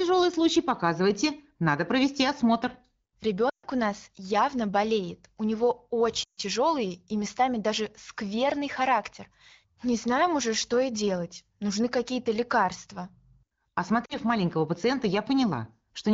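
A speech clip, carried over AMR wideband (HD Voice) with light coding texture, with three stretches where the sound quickly drops to near silence at 3.49–3.66 s, 6.23–6.41 s and 14.06–14.17 s. These are lost AMR speech frames, about 140, 140 and 40 ms of missing audio. The decoder smeared the last good frame with falling gain until speech resumed.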